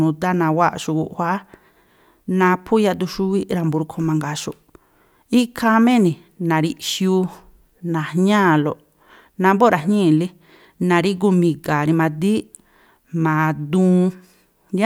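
No technical faults are audible.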